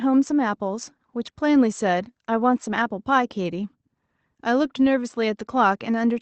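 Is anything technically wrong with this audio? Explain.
No, nothing stood out when listening to this speech, which sounds like an ordinary call routed through the Opus codec, with its upper range stopping at about 8 kHz as that call path normally does.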